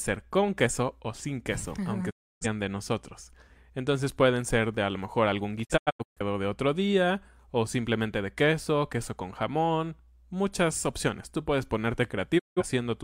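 At 2.09 s, just after "o sin queso aunque", the speech fades out in about 20 ms and stays silent until 2.46 s, returning on "de nosotros". From 5.63 to 6.21 s, after "a lo mejor algún", it breaks into several short holes, the longest about 0.13 s, before "de otro día o". From 12.38 to 12.63 s it mutes again. These are digital broadcast dropouts: the receiver stopped getting valid frames and muted until good ones returned, so the audio sent during those gaps is lost.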